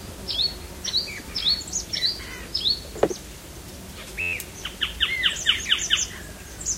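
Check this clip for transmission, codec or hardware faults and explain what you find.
One hardware fault: from 4.21 to 4.33 s, a system hang loop repeats an 11.61 ms buffer (likely 512 samples) ten times, producing an 86.1 Hz buzz. The waveform shows identical repeating cycles, the spectrogram evenly spaced 86 Hz harmonics, and about a tenth of a second of audio is lost.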